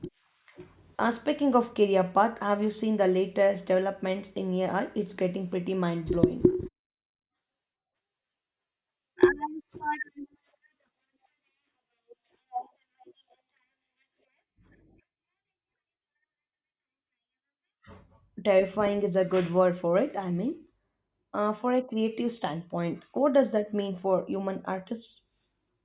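Nothing in the signal points to a technical fault at any point in the recording.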